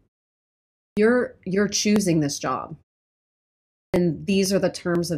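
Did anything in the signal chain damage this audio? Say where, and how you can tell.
Yes, two things. First, periodic USB or driver dropouts at the driver/buffer stage: a tiny tick every 0.5 s, from 0.47 s through 4.95 s, about ten in all. Each one skips around a millisecond of audio, as if something blocks the bus on a timer.

Second, a clipped start after a pause at playback, twice. At 0.88 s and 3.85 s, after quiet stretches of 0.88 s and 1.1 s, the sound starts abruptly with about 89 ms missing. The output device dozed off and was slow to wake.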